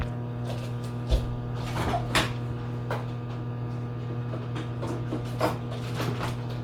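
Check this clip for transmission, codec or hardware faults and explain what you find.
One codec fault runs through the whole clip. Throughout, the upper spectrum has a grainy, breathy noise texture, plainly audible, with nothing above 20.2 kHz. The likely cause is Bluetooth LC3 compression at what sounds like about 48 kbps with 10 ms frames, filling discarded highs with noise rather than leaving the band-limited dullness of simple filtering.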